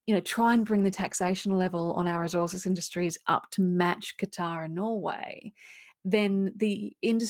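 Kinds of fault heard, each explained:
Call bitrate drop: Just after "you know", at 0.41 s, the call's encoder is forced from 32 kbps down to 14 kbps and stays at that floor for about 2.65 s, until the bitrate recovers near 3.13 s, before "up to match". The speech turns rough and watery, with coarser coding. On a spectrogram the upper band thins and fine harmonic detail smears in that span; the waveform envelope barely changes.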